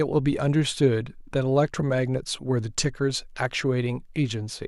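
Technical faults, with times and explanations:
No technical faults detected on this speech clip; nothing to log.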